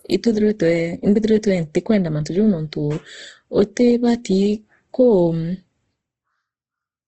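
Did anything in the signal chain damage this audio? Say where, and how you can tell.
Yes. Throughout the speech, the sound is grainy and rough, with no content above 9.2 kHz. This points to the codec stage, likely Opus compression in its CELT music mode at a low bitrate around 16 kbps, filling starved bands with folded or noise-like energy.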